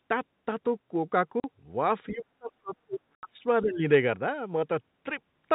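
This telephone-band speech recording, limited to below 4 kHz by its G.711 coding, has packet loss filled with silence. Packets went missing and the receiver played nothing in their place, so the speech drops out completely with hard edges: a 40 ms hole at 1.40 s and an 80 ms hole at 3.15 s, both of which fit 10 ms packets. Around 2.08 to 2.12 s the other side's voice leaks through, faint at roughly 25 dB below the main speech, most likely because the echo canceller left part of the loudspeaker signal in the microphone. Speech is also suppressed in double talk, likely the echo canceller turning the talker down while the far end spoke. From 2.1 to 3.45 s the voice dips in pieces, about a second in total, falling by as much as roughly 35 dB, and from 3.63 to 3.84 s it sags again by around 15 dB.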